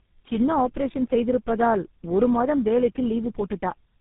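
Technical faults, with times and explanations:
Throughout: tandem speech coding. The speech sounds rough, muffled and warbly, as if four speech coders in a row, likely including GSM full rate, each re-coded the last one's degraded output, with nothing above 3.8 kHz surviving.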